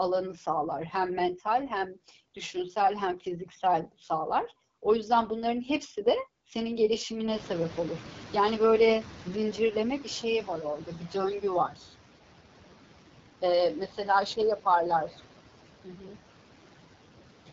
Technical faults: noise suppressor artifacts; AMR wideband (HD Voice) codec; noise suppressor catching up; speech cut by the noise suppressor

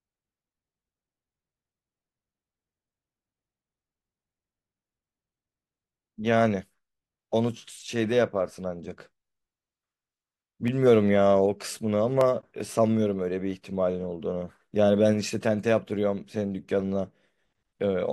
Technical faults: clock drift buffer slips

